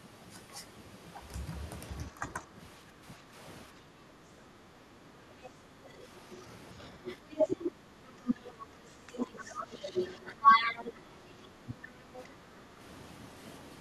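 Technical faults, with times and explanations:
2.39–5.01 s, 7.74–8.05 s, 12.45–12.53 s: background gated by the echo canceller. Room sound dips by about 7 to 9 dB as the canceller clamps the microphone, then recovers.
5.44–5.49 s, 7.06–7.70 s, 8.27–8.35 s, 9.17–10.92 s: other side's voice leaking through. A second voice, roughly 40 to 15 dB below the talker, likely residual loudspeaker echo the canceller missed.
11.54–11.82 s: speech suppressed in double talk. The talker's speech drops by around 40 dB for a brief stretch, likely the canceller attenuating both sides during overlapping talk.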